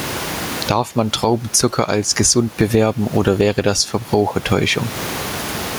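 Throughout the speech there is gain pumping. The room noise sits about 31 dB below the speech, and the gain swings roughly 25 dB, likely from excessive gain and a fast limiter. Unlike a noise gate, pumping raises the background rather than cutting it out.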